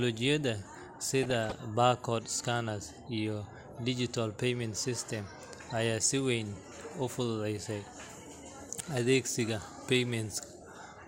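From 1.22 to 1.52 s, DAB burbling: weak-signal bit errors corrupt MP2 scale factors, making single sub-bands jump in level. The result is burbling over the speech, not silent dropouts.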